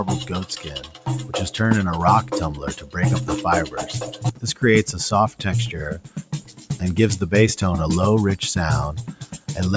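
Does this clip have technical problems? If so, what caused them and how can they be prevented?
Yes. A noise suppressor designed for speech was applied to this sound throughout. It treats sustained tones and decaying tails as noise, so the level swings by roughly 10 dB, giving a pumping, thinned character. Prevention: disable noise suppression or use a music mode for non-speech material.

Sound was cut by the noise suppressor at 0.52–1.07 s, 2.55–2.96 s, 4.05–4.63 s, 5.98–6.74 s and 9.09–9.48 s. Sustained or fading portions drop by about 9 dB while onsets pass through, and the call path's 8 kHz bandwidth is normal, not a fault. Prevention: switch the suppressor off for this content.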